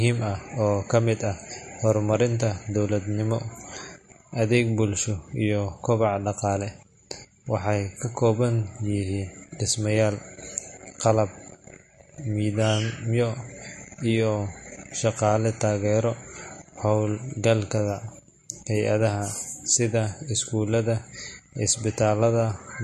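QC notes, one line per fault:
Throughout, MP3 compression: the speech was likely run through a low-bitrate MP3 encoder, and the damage fits something around 40 kbps. Short of bits, the encoder cut everything above 12.6 kHz, so the top of the spectrum is simply gone. It also left weak frequency lines flickering on and off from frame to frame, which gives the speech a plainly audible watery, swirling texture, with metallic chirps on s sounds and smeared attacks.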